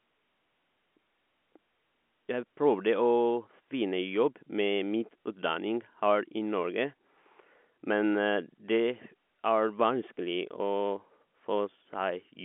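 There are no technical faults to describe in this speech, which comes through the G.711 telephone coding with nothing heard above about 3.8 kHz.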